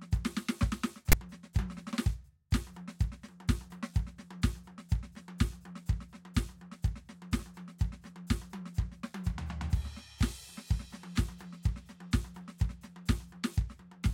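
File tags played as audio at 1.12 s: a block of text metadata is read as samples, giving a brief, hard-edged rasp offset to one side.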